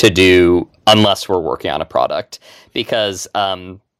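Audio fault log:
0.03–0.45 s and 0.87–1.35 s, microphone overload: peaks flattened with a harsh crackle, roughly 5% and 4% of samples clipped, likely from input about 12 and 9 dB too hot.
0.04, 1.05, 2.07 and 3.45 s, microphone volume stepped down: sudden level drops of about 3, 8, 4 and 2 dB, likely from software lowering input gain.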